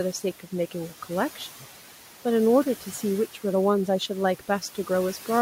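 A noise suppressor is acting on this speech recording throughout, pulling down every band it judges to be steady background by about 11 dB frame by frame, so the room noise, which sits about 17 dB below the speech, dips in the gaps and swells back under the talking. Between 4.39 and 4.89 s the same suppressor also mistakes part of the speech for noise and turns it down by up to about 10 dB, leaving roughly a tenth of a second of that stretch sounding swallowed and faint.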